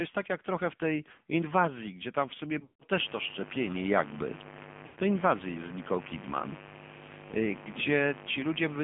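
AMR narrowband mobile codec damage runs through the whole speech clip: everything is squeezed into a 150 Hz to 3.5 kHz band, and the vocal-tract-plus-pulses model leaves the voice buzzy and synthetic, which fits a low mode around 7.4 kbps. Lost AMR speech frames appear at 2.60 to 2.84 s, right after "gdzie tam w sumie", and at 4.86 to 5.00 s. In each gap the decoder repeats the last good pitch and spectral settings with falling gain. The first gap's longest run, 160 ms, smears and fades toward silence; the second loses 100 ms. Mains buzz enters at 2.95 s and continues to the end: a raspy 50 Hz hum, roughly 15 dB below the speech, whose spiky harmonics reach well up into the band, pointing to switching spikes from a dimmer, rectifier or unshielded lead.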